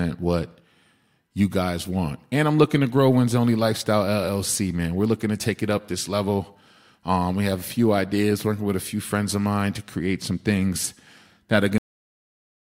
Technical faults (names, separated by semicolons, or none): cut-off end